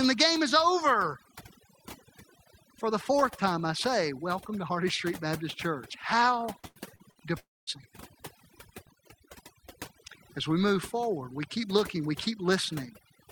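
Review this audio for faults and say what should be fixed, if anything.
Overdone noise removal runs through the whole speech clip. The noise reducer is set so aggressively that frequency bands near its noise estimate are pulled far down, taking quiet speech detail with them. The background becomes near-silent with twinkling specks. Unlike codec artefacts, the effect is constant rather than tied to moments. Prevent it by lowering the reduction strength or using a gentler setting.

Repeated packet loss with robotic sound occurs from 6.59 to 7.18 s. Four short gaps, the longest 83 ms, are each patched by extending the previous sound, so about 0.2 s, roughly a third of that stretch, is concealment. It sounds choppy, with pieces missing, and no single long hole. Prevent it with a larger jitter buffer or a more stable connection.

From 7.39 to 7.70 s, the sound is stretched into a fading buzz, then drops to about 0.22 s of silence before resuming, with about 0.28 s of content gone. 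This is likely a long network dropout. It is one sustained hole ending in silence, not a chain of brief robotic patches. Prevent it with redundancy or forward error correction on the link.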